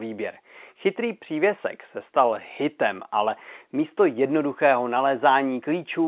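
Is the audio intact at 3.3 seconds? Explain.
Yes, at 3.3 seconds the speech is intact, with no fault present and only the narrow telephone band of its G.711 coding to be heard.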